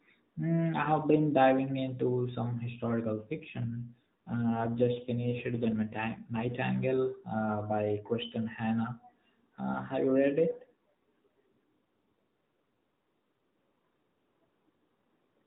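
At 3.18 s the mobile link appears to weaken, and the AMR codec is switched to a lower-rate mode, an AMR rate drop that fits a step down from 12.2 kbps to about 5.9 kbps. The speech stays in the same narrowband range with no gap, but turns rougher and buzzier, more synthetic, until 6.54 s. The same AMR rate drop returns from 10.51 to 12.22 s, after which the lighter coloration of the full-rate narrowband codec comes back.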